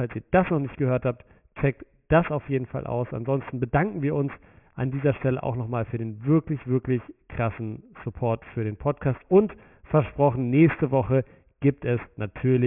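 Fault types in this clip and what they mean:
aliasing: The audio was brought down to a 6 kHz rate with no anti-alias filter first, so everything above 3 kHz folded back into the band as false tones, about 20 dB below the speech, grittying the sibilants and making the spectrum press right up against 3 kHz.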